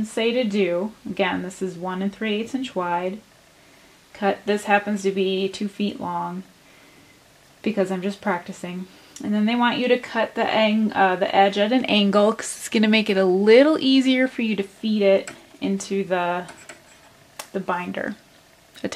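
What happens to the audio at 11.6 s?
Nothing goes wrong at 11.6 s; the audio there is intact, with no dropout, click, distortion or other fault to be heard.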